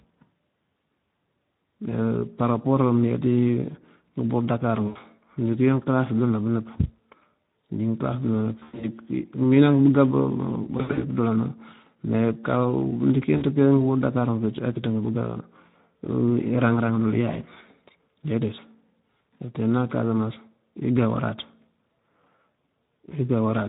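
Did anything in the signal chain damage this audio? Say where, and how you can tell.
Yes. At the codec stage, the whole clip carries Speex coding damage: speech sounds hoarse and grainy. That fits roughly 11 kbps, where the CELP excitation is starved of bits and the voice loses its clean buzz.

On the network side, there's VoIP packet loss concealed by the speech codec at 4.87–4.98, 8.59–8.90, 10.77–11.03, 13.37–13.44 and 17.31 s. The decoder stretches the last pitch and filter into a buzzy tone or coloured noise that fades, and the longer gaps stay smeared a beat after packets return.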